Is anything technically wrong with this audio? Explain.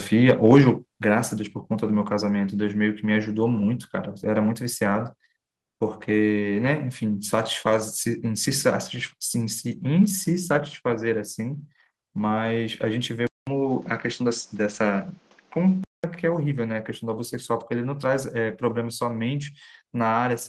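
Yes, there are two faults in this speech clip.

At 1.02 s the call software likely judged the microphone too hot and cut the device's input volume in a single step: a microphone volume stepped down. The level falls by about 5 dB at once, and speech and background drop together, so the level falls abruptly rather than fading.

From 13.27 to 16.04 s the input switched to a poorer device, likely another microphone or a headset's call profile taking over mid-recording. A short gap of 200 ms marks the switch. The new path passes a narrower band, so the sound turns duller and boxier. Its level shifts by around 5 dB, and it brings its own noise floor, sitting roughly 35 dB below the speech.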